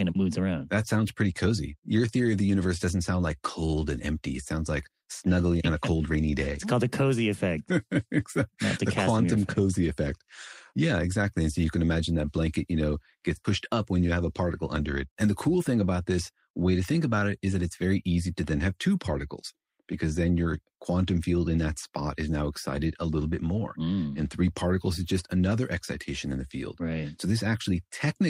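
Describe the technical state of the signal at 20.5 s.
At 20.5 s the speech signal is intact, with no audible technical fault at that moment.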